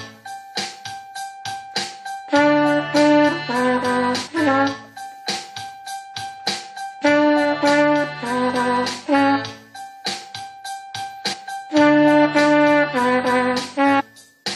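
Brief smeared blips at 4.26 s and 11.32 s, each a jump of roughly 70 ms, and a larger one of about 300 ms at 13.99 s, come from compressed frames skipped. Whole 23.2 ms frames went unplayed, and their overlap blurs each join.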